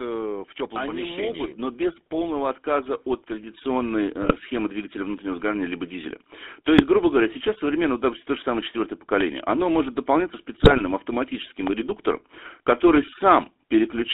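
Throughout, the speech has a buzzy, gravelly roughness and a narrow line band of roughly 250 Hz to 3.6 kHz. That is the GSM full-rate codec, which fits 13 kbps: it rebuilds the voice from a vocal-tract filter excited by sparse regular pulses, discarding fine detail.

From 4.22 to 4.33 s and 6.78 to 6.85 s the voice breaks into a brief squawking gargle. These are GSM bit errors: corrupted frames fed wrong filter, pitch or gain values to the decoder, so the spectrum bent and the level jumped. The same happens for longer from 10.53 to 10.81 s.

At 9.21 to 9.23 s and 11.67 to 11.69 s a single sharp loud pop sits about 10 dB above the speech, which carries on beneath it, likely from a voltage step such as a switch or static discharge.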